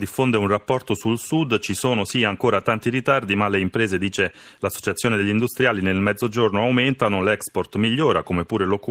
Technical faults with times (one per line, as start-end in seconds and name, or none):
none